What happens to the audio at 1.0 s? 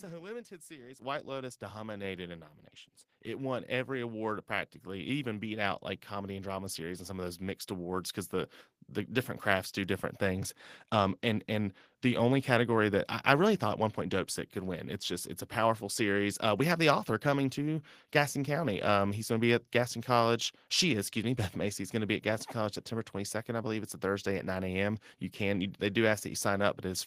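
At 1.02 s the microphone volume stepped up: the call software judged the input too quiet and raised the device's input gain in a single jump of about 9 dB. The whole signal, speech and background noise alike, becomes louder at that instant and stays at the new level. That distinguishes it from a talker leaning toward the microphone, which would lift the voice more than the room noise and build up gradually rather than in one abrupt step.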